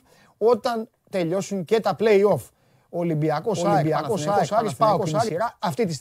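A doubled audio track runs from 3.55 to 5.29 s in this speech recording. A dry, full-band copy at roughly the original's level trails by about 0.7 s and cuts in and out abruptly, likely from a slower second capture path.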